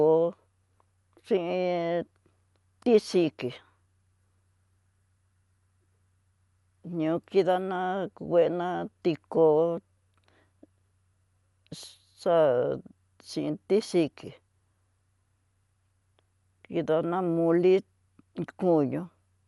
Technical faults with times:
0.00-19.47 Dolby Digital compression

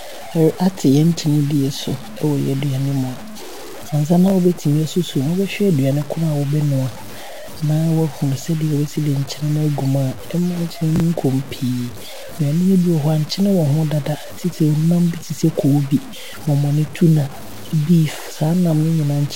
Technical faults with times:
0.00-19.35 low bit depth without dither
4.28-4.32 chunks out of order
10.96-11.00 chunks out of order

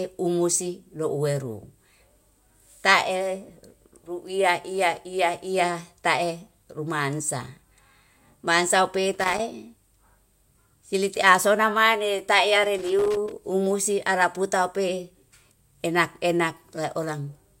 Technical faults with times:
9.13-9.40 loose connector crackle
12.78-13.39 loose connector crackle

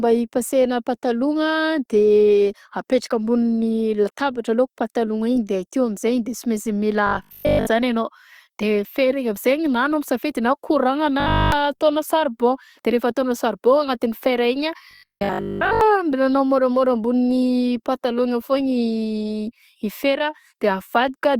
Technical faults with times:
7.07-7.67 robotic sound from repeated short buffers
11.20-11.52 robotic sound from repeated short buffers
14.91-15.81 robotic sound from repeated short buffers

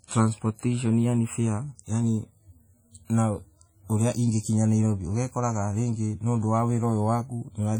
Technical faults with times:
0.00-7.80 WMA compression

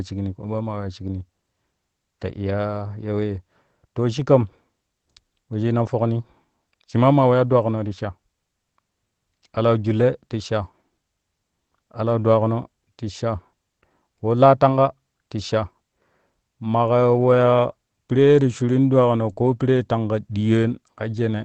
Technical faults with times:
19.29-19.48 lost packet rebuilt from error correction
19.33-19.38 short concealed packet loss

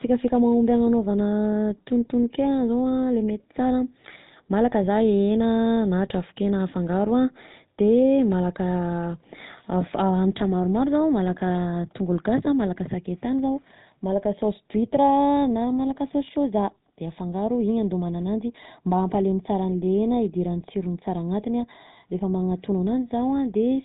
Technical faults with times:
0.00-23.84 GSM full-rate codec

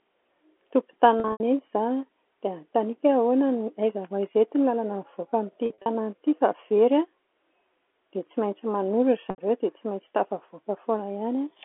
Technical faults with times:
1.20-1.40 packet loss with pitch repetition
5.66-5.86 packet loss with pitch repetition
9.30-9.38 packet loss with pitch repetition

